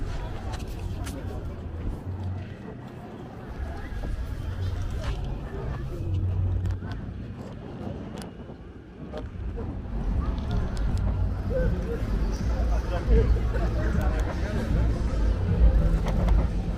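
No technical faults can be heard anywhere in the recording, and the signal holds steady throughout.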